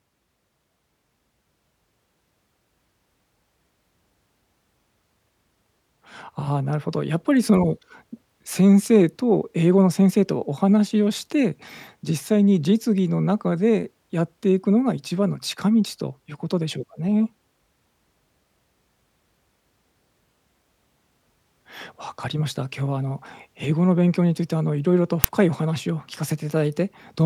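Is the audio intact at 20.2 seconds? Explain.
Yes, the audio is intact at 20.2 seconds, with no fault at that moment.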